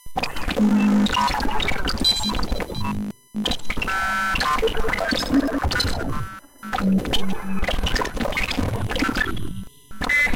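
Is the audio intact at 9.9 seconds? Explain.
No. USB whine runs through the whole clip, including 9.9 s. The bus draws current in 1 ms frames, and that ripple leaks in through power or ground, giving a fixed 1 kHz whine with harmonics, strongest at 11 kHz, roughly 30 dB below the sound.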